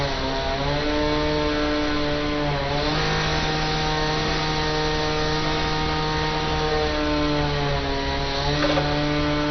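All the way through, the sound is dull with nothing above about 6.2 kHz, plus a gurgling, granular grit, most likely heavy MP2 compression at a low bitrate around 48 kbps.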